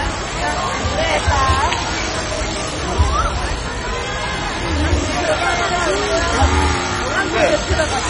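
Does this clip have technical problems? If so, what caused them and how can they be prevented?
Yes. Throughout, the sound is dull, with nothing above 10.3 kHz and a heavy gurgling, granular texture. This is likely MP2 compression, and the damage points to a very low bitrate near 32 kbps. Encode at a higher bitrate to prevent it.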